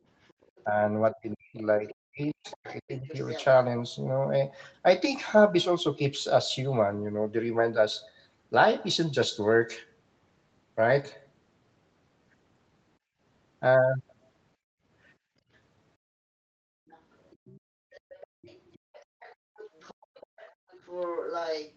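From 0.25 to 0.64 s a faint second voice sits under the speech, about 35 dB down, the other side's voice leaking through. The likely cause is loudspeaker echo that the echo canceller left in the microphone signal. It returns much stronger from 1.57 to 3.44 s, only about 15 dB below the talker.

Overlapping that, from 0.65 to 3.08 s, comes speech suppressed in double talk. With both sides likely talking at once, the canceller could not tell the talker from the echo and pulled everything down. The voice drops in pieces, by as much as 40 dB, for around a second in total, so parts of it vanish while the other side is heard.

Later the canceller clamps the microphone while the loudspeaker plays, which is background gated by the echo canceller. The room sound dips briefly at 12.99 to 13.2 s, by about 22 dB. It then drops out for roughly 1.5 s within 14.56 to 16.89 s, by about 34 dB, and for around a second within 17.6 to 20.7 s, by about 35 dB. 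Each time it comes back when the canceller releases.

From 16.89 to 21.73 s the other side's voice leaks through again, only about 10 dB under the speech. This is the strongest stretch of residual echo, running through the last part of the clip. All of it sits within the 8 kHz band of the Opus call path.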